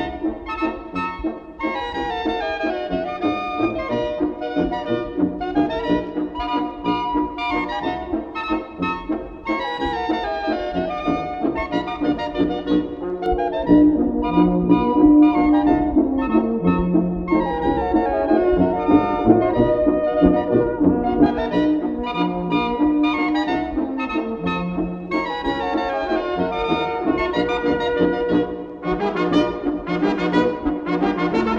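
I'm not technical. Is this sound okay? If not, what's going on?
No. From 13.26 to 21.26 s there's de-emphasis applied wrongly: a treble cut meant to undo a boost that wasn't there, so the sound turns dull and muffled. Unlike a sharp filter cutting off the top, the treble fades gradually, growing weaker the higher it goes.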